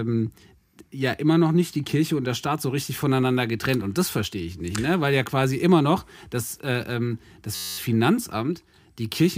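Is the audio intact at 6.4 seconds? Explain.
Yes, at 6.4 seconds the speech plays through intact, with no audible fault at that moment.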